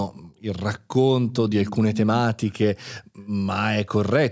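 A speech recording carrying echo leak, likely from a far end on loudspeaker whose echo canceller let part of its microphone pickup return down the line. A delayed copy of the talker appears about 118 ms behind the original, at 1.29 to 1.36 s, roughly 15 dB under the speech, and again at 2.47 to 2.53 s, far fainter. The brief ghostly repeats sit within call microphone processing that leaves nothing above 8 kHz.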